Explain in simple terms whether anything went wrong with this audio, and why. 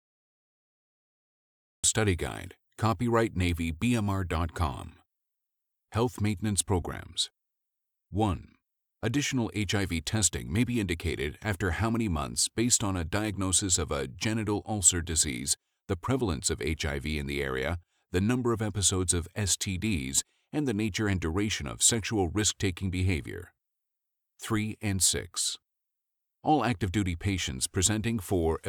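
The clip has a cut-off start. The first 1.84 seconds are dead digital silence, and then the speech jumps in abruptly in the middle of a sound with no natural beginning. The recording or stream started late and missed the opening.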